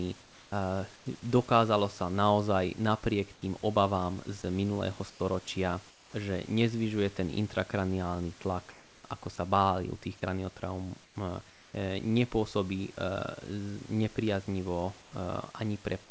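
Comfort noise in place of the background appears in six stretches: 0.22 to 1.06 s, 3.34 to 3.42 s, 5.10 to 6.14 s, 8.42 to 9.04 s, 11.04 to 11.74 s and 15.02 to 15.12 s. In each, the pauses between speech lose their real room noise, which otherwise sits about 27 dB below the speech, and a smoother synthetic hiss takes over. The likely cause is discontinuous transmission: the sending side's voice detector stopped sending during silence, and the receiver generated noise to fill the gap. Within the longer stretches only part of the time is replaced, about 340 to 400 ms each, so real and synthetic background alternate. At 3.34 s the substitute is about 4 dB quieter than the room noise, and at 15.02 s about 3 dB quieter. All of this rides on a band-limited call sound with nothing above 8 kHz, which fits a G.722 path at 64 kbps.

Sound dropped by the voice detector occurs at 8.42 s, at the start of the fourth comfort-noise stretch. 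About 20 ms of actual sound is lost and replaced by the same steady synthetic noise. The likely cause is the detector judging quiet sound to be background and cutting transmission a moment early, so the sound ends abruptly and the hiss takes over.

An onset clipped by the voice detector is heard at 16.08 s, right at the end of the clip. The first 20 ms or so of a new sound are missing, so it starts abruptly instead of rising in. The likely cause is the detector reacting late to sound resuming, with comfort noise filling the moment before transmission restarted.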